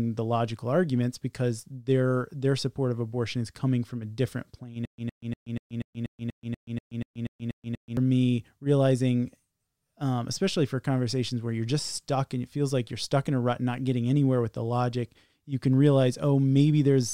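At 4.85 s, just after "from a different plane", the speech breaks into a stutter with silent gaps lasting until 7.97 s, where it resumes at "me realizing". A 114 ms fragment repeats 13 times, each followed by 127 ms of silence, giving an even 242 ms cycle. This is likely a stalled player or stream replaying its last buffer on each retry. The speech that belonged in that stretch is lost. A waveform shows identical blocks separated by flat gaps, and a spectrogram shows repeating vertical bands with empty columns between them.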